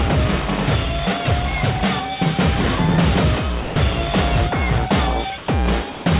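At 3.62 s the music gives way to steady comfort noise for 140 ms, then returns at 3.76 s. Two more gaps follow, at 5.38 to 5.48 s and at 5.92 to 6.06 s. Each matches sound dropped by the voice detector: the sender likely judged the music to be background and stopped transmitting, and the receiver filled in noise until detection resumed. The surrounding audio stops at 4 kHz, consistent with a narrowband telephone codec.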